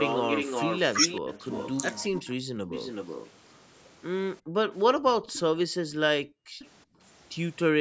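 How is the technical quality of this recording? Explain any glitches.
The recording has clear call-path faults: repeated echo, speech that drops out while both sides talk, and one brief dip in the background.

Echo leak appears at 0.00–2.03 s, 2.69–3.30 s, 5.30–5.39 s and 6.27–6.70 s, likely from a loudspeaker whose echo canceller let some of the far sound back into its microphone. A delayed copy trails the speech by 364 to 397 ms. It starts strong, about 5 dB below the speech, then fades to about 15, 20 and finally 25 dB down.

Speech suppressed in double talk hits 2.08–2.56 s and 4.45–6.51 s. This is likely an echo canceller that could not tell the local talker from loudspeaker echo and turned both down together. The speech sinks by roughly 35 dB and then 40 dB, chopping out for about 0.3 s and 1 s in total.

Background gated by the echo canceller occurs at 6.85–6.99 s. The canceller clamped the microphone while the loudspeaker was active, so the room sound drops by about 25 dB for roughly 150 ms and then returns. 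The audio also stops at 8 kHz, as expected from the call's microphone processing.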